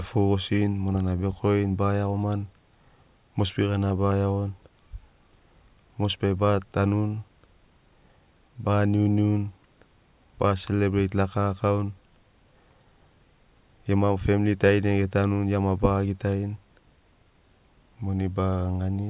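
No technical faults can be heard anywhere in this speech recording. There is no moment in it that stands out as an event worth pointing to.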